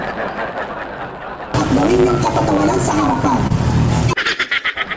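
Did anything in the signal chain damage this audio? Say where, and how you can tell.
Yes. At the driver or buffer stage, there's a block size mismatch (truncated) running the whole way through. You hear a steady 109 Hz buzz, and everything plays 1.09 times fast at about normal pitch. That means one stage writes longer blocks than the next reads, and each block's tail gets dropped.

On the network side, there's a short stall from a late packet at 3.47 to 3.52 s over the G.722 call path, which has nothing above 8 kHz. The jitter buffer ran dry, so the receiver held the last sound for 30 ms and then picked up where it left off. Nothing's missing, just a brief smear.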